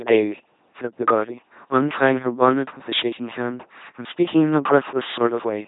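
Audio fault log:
Throughout: LPC-10 vocoder. The speech has been rebuilt from a ten-pole vocal tract filter excited only by a pulse train or noise, so it buzzes mechanically, with hiss or buzz where voicing is misjudged. Nothing is heard above 3.8 kHz, and the coding runs at 2.4 kbit/s. Unlike a bandwidth limit alone, the natural voice texture is gone.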